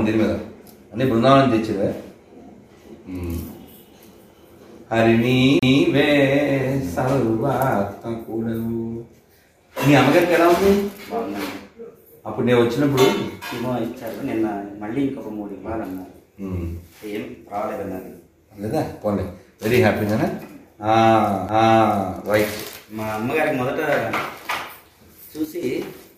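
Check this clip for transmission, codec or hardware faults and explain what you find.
Two kinds of fault are audible: two CD skips and, near the end, a short level drop that is likely one channel dropping out.

CD skip at 5.59–5.63 s and again at 21.48 s: a knock or a flaw made the laser jump onto a different turn of the disc's spiral, so playback briefly mutes, for about 30 ms and then only a few milliseconds, and resumes elsewhere. Unlike a plain dropout, the sound after the gap does not continue where it stopped.

Between 25.45 and 25.63 s the level falls abruptly by about 6 dB, then returns, with nothing lost from the sound itself. The likely cause is one stereo channel dropping out while both carried identical content, halving the mono sum. A skip would instead break continuity.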